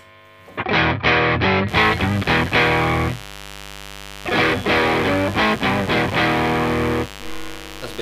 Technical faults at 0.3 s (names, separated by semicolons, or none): none